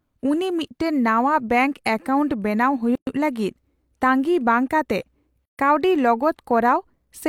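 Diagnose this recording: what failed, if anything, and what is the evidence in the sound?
Codec stage: the speech was encoded in separate pieces and joined untrimmed, so each run's start-up delay and last-frame padding remain as a gap at a join of encoded pieces. Silence cuts in at 2.95 to 3.07 s (117 ms) and, after "ᱵᱟᱝ ᱠᱟᱛᱮ", 5.45 to 5.59 s (134 ms), with smeared edges. Speech resumes where it stopped.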